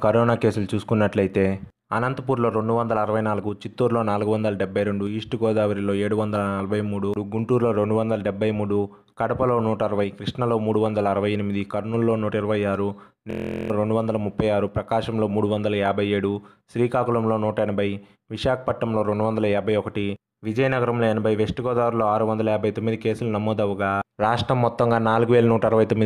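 A system hang loop from 13.31 to 13.70 s repeats one 23.2 ms slice, which fits a 1024-sample buffer. Unlike a dropout's silence, it produces a steady 43 Hz buzz while about 0.4 s of audio is lost.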